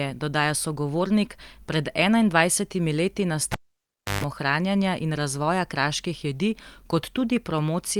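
At 3.52 s the cable is pulled and plugged in: a pop, about 0.67 s of near silence, a 0.14 s burst of 50 Hz buzz, then a second pop by 4.24 s, unlike a plain dropout.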